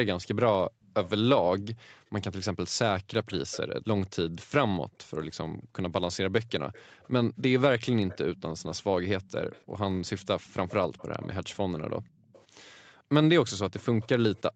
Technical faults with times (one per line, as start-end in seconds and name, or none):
0.68-2.10 background gated by the echo canceller
0.82-1.10 echo leak
3.31-4.45 echo leak
4.85-7.02 background gated by the echo canceller
6.73-14.42 echo leak
11.98-13.10 background gated by the echo canceller